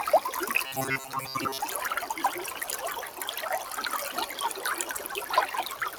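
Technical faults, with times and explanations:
Throughout: noise suppressor applied to music or sounds. Sustained parts of the sound and their fading tails sink while sharp onsets come through, so the level pumps and flutters by around 5 dB and the ambience thins out behind each attack. A suppressor tuned for speech is treating steady tones and decay as background noise and pulling them down, then letting go whenever a transient arrives. The result is a restless, hollowed texture instead of a natural sustain.
0.66 to 1.59 s: robotic sound from repeated short buffers. The sound turns into a stiff, metallic buzz pinned at 134 Hz, still loosely tracking the shape of what it replaces. This is likely a playback path starved of fresh audio, looping the last fragment of roughly 7.5 ms to fill the gaps. That repeat length fits the 134 Hz buzz. Most of the stretch is made of these repeats, and the real material underneath is skipped.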